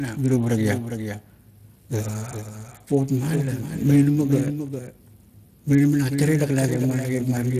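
From start to finish, a second copy of the whole speech runs roughly 0.4 s behind the first, at about 10 dB lower. This doubled audio track is likely one capture reaching the mix twice through a slower path. Unlike room echo or reverb, the copy has no decay and no room colour, and there is only one repeat.

Throughout the clip, Speex codec damage is plainly audible. The CELP coding leaves the speech sounding noisy and hoarse, at a bitrate of about 22.4 kbps. Nothing is present above 15.2 kHz. The roughness sits inside the voice itself rather than showing up as the swirling or warbling typical of transform codecs.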